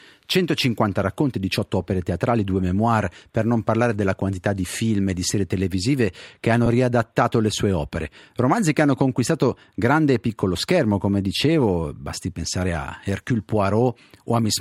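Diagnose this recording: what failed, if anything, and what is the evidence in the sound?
The fault sits in the wireless link. At 6.66 s there's a brief lost LE Audio frames event, a single 10 ms dropout on the Bluetooth LE Audio link. The LC3 decoder fills that gap by replaying the previous frame's spectrum with scrambled signs, so instead of a click or hole you get a tiny noisy smear for one frame, then clean sound resumes. Because it's only one frame, concealment never reaches the fade-out stage. The coding from the codec itself is light.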